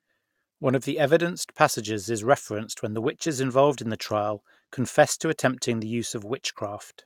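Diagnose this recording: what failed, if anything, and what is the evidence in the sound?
Nothing failed here; no stage shows any fault.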